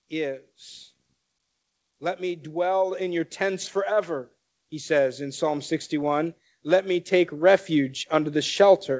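From 1.98 s to 8.87 s, automatic gain rising: the gain control judged the input too quiet and raised it by about 12 dB, lifting speech and background together.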